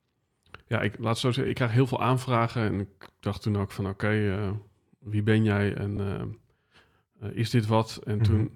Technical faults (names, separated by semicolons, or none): repeated frames